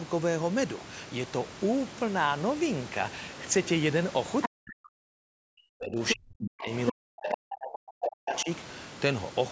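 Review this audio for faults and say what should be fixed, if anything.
Other side's voice leaking through appears as five brief scraps, each about 70 ms long, at 4.42, 6.08, 7.3, 8.02 and 8.36 s. Most sit roughly 5 dB below the talker, the one at 8.02 s comes through at about the same level, and the one at 8.36 s is much fainter. The likely cause is a loudspeaker playing the far end into the microphone, with the echo canceller leaving residue unremoved. Better speaker-microphone separation, a headset, or a better-converged echo canceller would prevent it.

Speech suppressed in double talk affects 4.48 to 6.73 s and 6.91 to 8.49 s, about 2 s and 1.5 s of audible damage respectively. During these stretches the talker's level collapses by as much as around 40 dB, so the speech drops away in pieces. The leak scraps at 6.08, 7.3, 8.02 and 8.36 s fall inside these spans. This likely happens because the echo canceller, faced with both sides talking, cannot tell near speech from echo and attenuates everything. 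A double-talk detector that holds suppression back while the near talker is active would prevent it.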